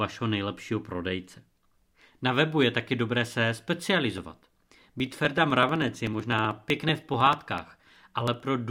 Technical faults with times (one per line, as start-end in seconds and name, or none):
4.18-8.40 periodic USB or driver dropouts